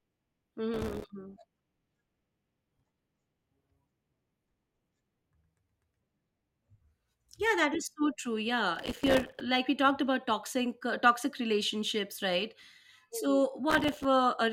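Processor overload crackle shows up three times in this speech: 0.74 to 1.10 s, 8.76 to 9.41 s (just before "like we talked about"), and 13.70 to 14.05 s. In each stretch the processor falls behind and misses buffer after buffer, dozens of them, each dropping to a tiny silent gap with hard edges. The gap spacing fits a buffer of only a few milliseconds, so the dropouts blur into a gritty, tearing crackle over the voice, and the middle burst runs longest.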